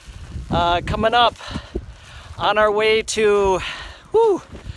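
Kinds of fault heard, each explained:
No faults can be heard in this audio. There is nothing in the sound that needs explaining here.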